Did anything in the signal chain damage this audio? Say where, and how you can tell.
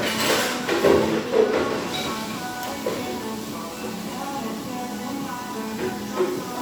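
No, nothing audible points to damage at any stage of the chain on this recording of sounds.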